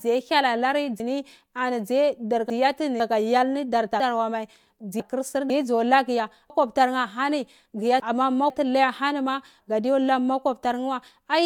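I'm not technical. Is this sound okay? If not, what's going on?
No. The speech has three cases of chunks out of order. The audio travels in half-second pieces, and at times one piece arrived late and was played after pieces that should have come after it. It happens from 1.0 to 3.0 s, from 4.0 to 5.5 s (just before "dzo lagu ya"), and from 6.5 to 8.5 s (just after "dzo lagu ya"). Nothing is missing, but the speech briefly jumbles.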